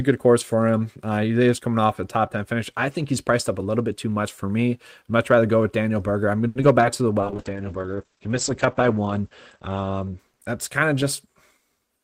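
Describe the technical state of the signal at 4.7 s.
At 4.7 s the speech signal is intact, with no audible technical fault at that point.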